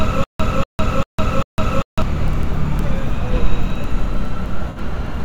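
From the very first moment until 2.02 s, the sound is already caught in a stutter with silent gaps. A burst of about 240 ms repeats four times, each followed by about 156 ms of digital silence, so it returns every 395 ms. The likely cause is a stalled player or stream replaying its last fragment at each retry and then running dry, so the material meant for that stretch never plays. On a waveform this looks like identical blocks separated by flat silent lines. A spectrogram shows matching slices divided by fully blank vertical bands.

At 4.70 to 4.78 s there is AAC frame loss with concealment, a 64 ms dropout, which fits about three missing frames. The decoder filled the hole by reusing the last good spectrum with altered phase and energy, so the sound briefly turns smeared and noisy instead of cutting out. On a spectrogram the patch appears as a short, blurred stretch of repeated spectral content lacking fine detail. 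The waveform shows a brief section whose envelope no longer matches its surroundings.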